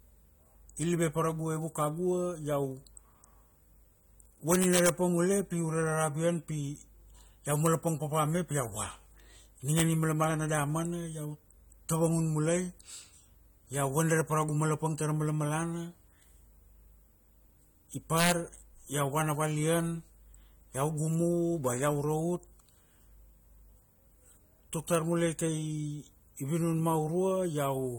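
The speech sounds dull and smeared throughout, with a warbly edge and nothing above 18.6 kHz. That's likely AAC compression at a low bitrate, somewhere around 32 kbps by ear. On top of that there are integer overflow cracks, where loud peaks wrap to the opposite sign instead of limiting, up to about 4 dB past full scale. They come as violent snaps at 4.52–4.89 s, at 7.66 s just before "papa me", at 9.78–9.82 s, at 18.18–18.32 s just before "iau vana valian", and at 24.95 s.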